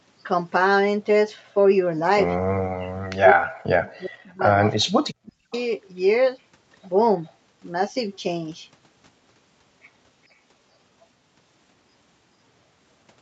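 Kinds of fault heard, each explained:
Speech suppressed in double talk: with both sides talking at once, the echo canceller likely mistook this talker for loudspeaker echo and turned everything down. The speech dips by roughly 40 dB between 2.73 and 4.62 s and again from 4.8 to 5.53 s.
Echo leak: the far end's echo canceller likely failed to remove all of the loudspeaker sound reaching its microphone, so a faint copy came back about 410 ms late. Brief scraps are audible at 5.53 s and 7.25 s, roughly 25 and 35 dB below the speech.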